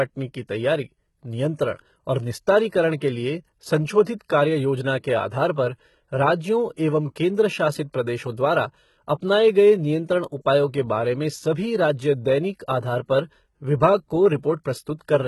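Throughout the speech, the treble sounds synthetic and gritty. Nothing reaches above 11.8 kHz. S sounds turn metallic and lispy, and the damage is heavy. The likely cause is HE-AAC compression at a very low bitrate, near 16 kbps, rebuilding the treble from copied lower bands.

Pre-echo occurs three times. A short hiss runs from 4.04 to 4.07 s, just before "कार्य योजना के आधार". Another spans 6.76 to 6.78 s, before "एवं केंद्र". A third falls at 7.93 s. Coding noise smears ahead of each sharp onset, softening the attack.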